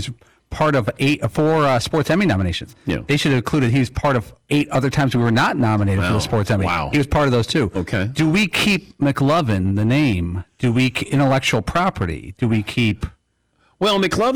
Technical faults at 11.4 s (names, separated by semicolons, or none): hard clipping